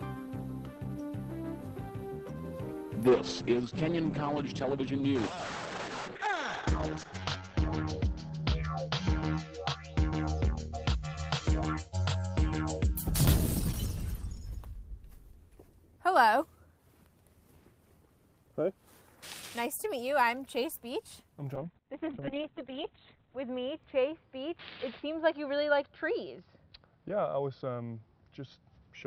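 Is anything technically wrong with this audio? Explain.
Yes. A call bitrate drop at 3.11 to 13.01 s (32 to 9 kbps, top cut to 8 kHz) and again from 21.58 s (32 to 6 kbps, 4 kHz cutoff, unrecovered by the end): the encoder, starved of bits, codes coarsely and trims highs, so the sound turns rough and muffled.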